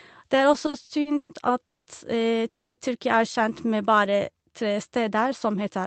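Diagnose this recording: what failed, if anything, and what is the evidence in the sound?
Network and jitter buffer stage: repeated stalls (stutter) between 0.53 and 1.31 s. The speech hitches about eight times in under a second, with the longest hold around 120 ms. Roughly 280 ms of that span, about a third, is the receiver stretching the last sound while it waits. Packets were arriving late or too slowly, so the buffer kept running dry. Nothing is actually lost. The speech just drags and catches.

Call audio freeze, twice, at 1.65 to 1.88 s and 2.48 to 2.79 s. Each one drops into silence, about 210 ms and then about 280 ms, before the speech resumes right where it stopped. The likely cause is packets being held up in transit until the jitter buffer ran empty. That pushes the playout back by roughly 210 ms and 290 ms respectively. It inserts a gap instead of losing content.

Jitter buffer slow-down from 3.66 to 4.89 s. 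Over about 1.2 s the speech runs at roughly 88% speed with the pitch unchanged, and sounds are drawn out. About 155 ms gets added in total by repeating single pitch periods and bits of pause. That's the buffer rebuilding its reserve. It all rides on an Opus call path whose 8 kHz bandwidth limit you can hear as a dull top end, with coding noise that points to a bitrate around 24 kbps.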